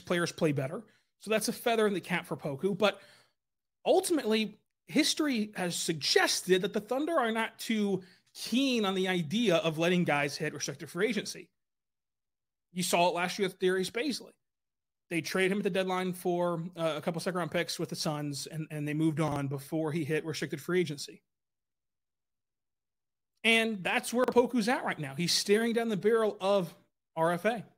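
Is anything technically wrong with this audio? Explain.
Yes. There are chunks out of order at 19.28–19.36 s and 24.24–24.32 s, where one 40 ms chunk plays a chunk late, swapping places. That gives a brief jumbled blip in the speech.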